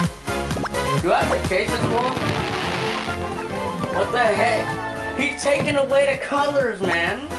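Nothing is technically wrong with this audio, which reaches the listener over a WebRTC call path using Opus with its top end stopping at 12 kHz, so there are no faults to place in time or trace to a cause.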